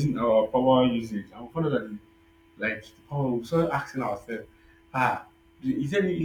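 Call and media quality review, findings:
Gritty, inharmonic fizz riding on the speech, 3.45 to 5.76 s, worst on loud and bright parts. Crude rate conversion, probably in the resampler. Sounds like nearest-sample dropping, consistent with 48 kHz to 44.1 kHz. Buzz roughly 30 dB under the speech.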